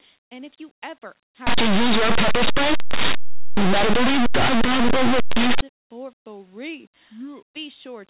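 From 1.47 s to 5.61 s the speech collapses into harsh, very loud distortion: linear audio read as companded. Plain 8-bit linear samples are being expanded as though they were mu-law codes, so tiny values just to one side of zero jump to the loudest outputs while those on the other side stay quiet.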